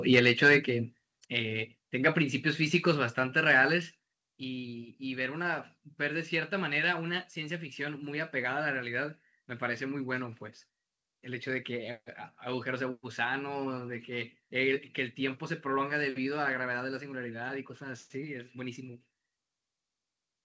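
At 1.2 s and again at 4.29 s, the speech and the background behind it drop abruptly in level, each time by about 5 dB, in a single step. The cause is likely a microphone volume stepped down: the call software judged the input too hot and cut the device's input volume at once. The audio, carried over a G.722 call path with nothing above 8 kHz, stays at the new lower level after each step.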